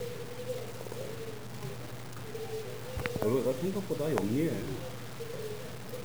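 From start to finish the sound carries a coarse, grainy distortion that moves with the signal, roughest in the quieter stretches, where soft detail breaks up into a gritty sputter or drops out between steps. The likely cause is low bit depth without dither: the audio appears to have been truncated to about 6 bits with no added noise, leaving an error that tracks the signal at only about 15 dB below it.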